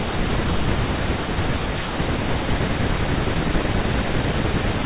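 At 2.5 to 2.61 s there is a skip ahead. Later audio was already queued, so the receiver threw away a stretch that had arrived late or overflowed the jitter buffer and went straight on to the newer audio. About a second of speech is missing, and the two sides are butted together with essentially no gap. The speech lurches forward mid-flow and a piece of the sentence is gone, heard as an abrupt jump.

From 3.06 to 3.50 s comes a jitter buffer speed-up. The buffer was holding more audio than its target, so to bring the delay back down the receiver cut out short pitch-period-sized slices over and over, about 50 ms in total. The speech plays at 111% speed with its pitch unchanged and sounds briefly rushed. Throughout, the call path passes nothing above 4 kHz, which fits a narrowband telephone codec such as G.711 and gives the speech its muffled, phone-like top end.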